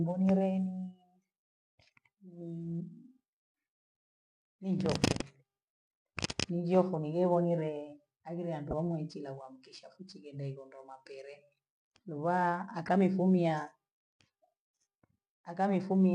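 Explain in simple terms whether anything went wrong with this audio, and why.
Something went wrong twice: a corrupt frame was decoded. The audio was stored in small compressed chunks, and in a couple of neighbouring chunks some data got scrambled, yet the player played them anyway. Misreading that data puts sound at the wrong pitches for a split second, so you hear a brief chirp or blip cutting into the speech, at 8.71 s and again at 12.86 s, each lasting about 0.03 s.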